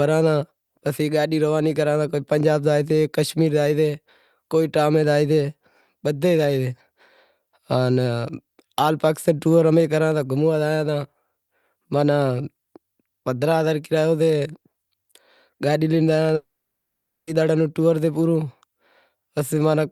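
A speech clip where, at 16.35 s, the sound suddenly smears into a short fading buzz, then drops to silence for about 0.83 s before speech resumes at 17.30 s with nothing recovered. This is a long network dropout, likely caused by a run of lost packets: the receiver stretched the last received sound briefly as concealment, then gave up and left a gap. Roughly 0.92 s of the original audio is simply missing.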